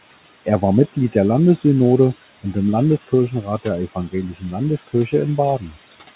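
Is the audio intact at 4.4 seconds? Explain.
No. Speech cut by the noise suppressor occurs from 4.33 to 4.54 s. The suppressor mistook part of the speech for background noise and turned it down by as much as about 15 dB, leaving roughly a tenth of a second sounding swallowed and faint. Noise suppressor artifacts are also present at that moment. The suppressor lowers the bands it reads as steady noise by about 17 dB, frame by frame, so the noise sinks between the words and rises under them.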